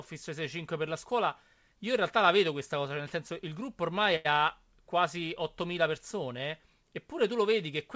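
Speech over a WebRTC call path, with nothing above 8 kHz, which fits G.722 at 64 kbps. Right after "senso il gruppo ormai", from 4.16 to 4.39 s, a short stall from a late packet holds the sound for about 88 ms with a slight buzz or dip. Unlike a lost packet, nothing is skipped, and the speech resumes exactly where it paused.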